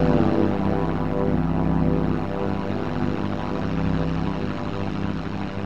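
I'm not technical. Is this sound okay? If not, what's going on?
No. The sound has a fault called overlap-add ripple, and it runs through the whole clip. The audio was chopped into small overlapping pieces and stitched back together. The overlaps don't blend evenly, so the loudness dips and swells with every piece, about a hundred times a second. The dips are very deep. The result is a harsh, metallic buzz laid over everything.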